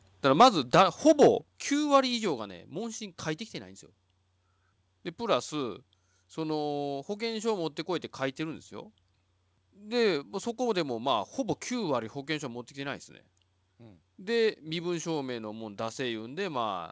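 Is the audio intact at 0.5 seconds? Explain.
No, 0.5 s sits inside a stretch of microphone overload from 0.31 to 1.28 s. The peaks push about 8 dB past the converter's ceiling and get their tops sheared off, giving a harsh, crackly edge, likely from input gain set too high. Just before that, at 0.42 s, there's a microphone volume step down of about 3 dB, a sudden one-step drop in level, likely the call software pulling the input gain back after catching the clipping.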